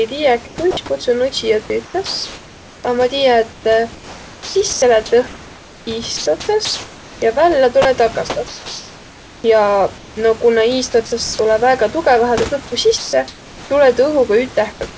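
From 0.47 to 0.77 s there is comfort noise in place of the background. The real room sound turns steady and featureless, likely because the sender paused transmission. Inside it, from 0.71 to 0.77 s, there is sound dropped by the voice detector. A brief piece of speech vanishes into the noise, likely because the detector took it for background.

From 1.85 to 10.16 s, just before "o kuna", there is sound chopped by the voice detector. Speech turns choppy, likely because the detector kept switching transmission on and off.

From 11.06 to 11.12 s, after "o kuna", speech is dropped again. Comfort noise then stands in for the background until 11.39 s, just before "tulõ väega tugõvahe". Both are likely the same detector cutting out.

From 12.98 to 13.13 s, speech gives way to steady noise. Comfort noise continues to 13.70 s. From 14.72 s to the end, comfort noise replaces the background once more. 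These are likely further pauses in transmission.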